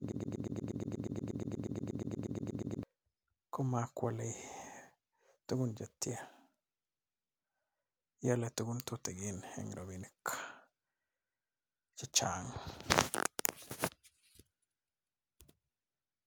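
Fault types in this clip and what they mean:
Broken-record loop: from the very start until 2.83 s, a fragment of about 120 ms repeats exactly, back to back, some 23 times. It is likely a stalled player or stream resending its last held piece. The speech that belonged there is lost.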